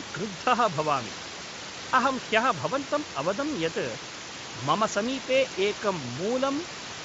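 Nothing stood out on listening to this speech clip; the room noise sitting about 13 dB below the speech is part of the recording itself.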